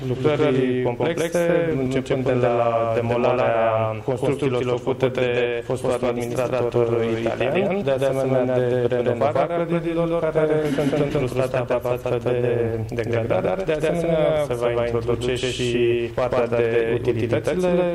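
From start to finish the audio carries a doubled audio track: a second, full-band copy runs roughly 150 ms behind the first and at about the same level, giving a persistent slapback stutter on every onset. The likely cause is the same signal being picked up twice, once through a slower path. Unlike an acoustic echo or reverb, the trailing copy has no decay tail, no room colouring and no loss of brightness, and it never fades.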